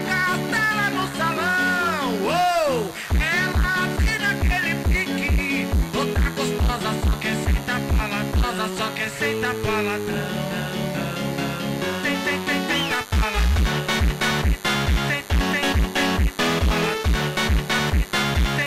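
A nearby DECT cordless phone or base station is firing radio bursts every 10 ms, and the audio circuitry rectifies them. The result is DECT cordless phone buzz for the whole clip: a steady, thin 100 Hz buzz with many harmonics, sitting well below the main sound.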